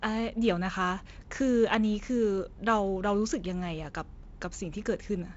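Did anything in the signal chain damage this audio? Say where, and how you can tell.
No damage found anywhere.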